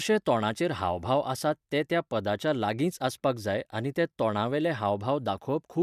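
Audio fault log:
The speech signal comes through intact, with no audible technical faults anywhere in the recording.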